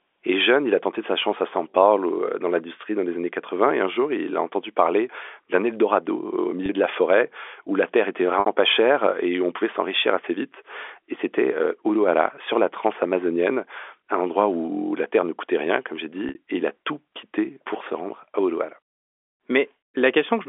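Packet loss with pitch repetition occurs at 6.66 s (30 ms, just before "de la forêt où"), and at 8.40 s and 16.29 s (60 ms each, after "où la terre était" and "coûtait rien comme j'ai"). Each time the receiver repeats the last pitch period to fill the gap, fading it out over about 50 ms, so the short first loss briefly holds on a buzzy tone, while the two longer ones fade into silence before the speech returns with a short cross-fade.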